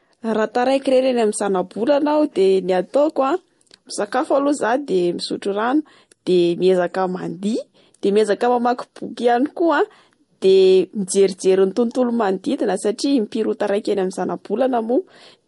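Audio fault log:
Throughout: transcoding between lossy codecs. The speech has nothing above 11.2 kHz, and two layers of coding artefact are heard together. This fits an MP3 stage near 48 kbit/s, likely followed by a Vorbis re-encode near 51 kbit/s. The second codec spends its bits on the first one's damage and adds its own. The lowest cut-off in the chain remains, so the top stays dull.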